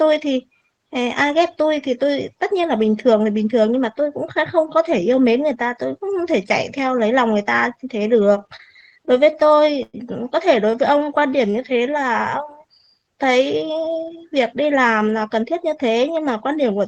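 Speech, with three jitter buffer faults. From 8.31 to 9.96 s there are repeated stalls (stutter). The buffer ran dry 17 times, and the receiver stretched the last sound to cover about 284 ms, the longest gap 108 ms. Nothing is lost, but the speech drags. From 10.66 to 12.00 s comes a jitter buffer slow-down. Repeated pitch periods add 141 ms, so speech runs at 90% speed with unchanged pitch. From 13.88 to 15.91 s a jitter buffer speed-up trims about a fifth of a second. Speech runs at 109% and sounds hurried.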